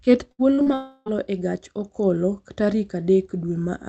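Right at 0.31 s there's a burst of packet loss running to about 0.42 s. Roughly 80 ms of audio never got played. The receiver stretched the last bit of sound for about 70 ms, fading it down, so you hear it held and dimming. Then the audio jumps ahead with that chunk simply gone.

Two short concealed packet losses follow close together, at 0.55 to 0.61 s and 0.62 to 0.69 s. Each loses about 40 ms, and the decoder patches over it by carrying the previous sound forward for 30-odd ms before blending back into the real signal. They come across as a quick smear or wobble, twice in a row.

From 0.74 s to 1.09 s the last sound is carried on and slowly fades over about a third of a second. It never quite reaches silence before the audio comes back at "e gach okolo", and whatever was said in that stretch is lost. The likely cause is a long network dropout, with the receiver's concealment filling the whole gap.

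Underneath it all you can hear the call path: Opus coding noise and a top end cut off at 8 kHz, which fits a bitrate around 32 kbps.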